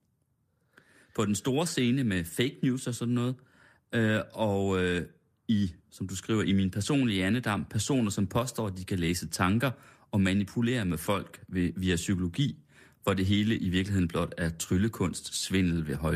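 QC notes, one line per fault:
No technical faults found: the speech signal keeps unbroken continuity across the whole recording.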